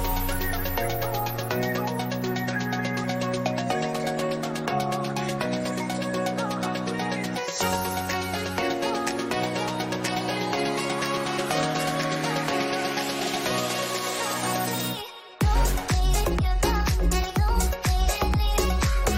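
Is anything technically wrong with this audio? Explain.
No, nothing technically wrong can be heard in this audio. There are no dropouts, glitches, distortion or other faults anywhere in it.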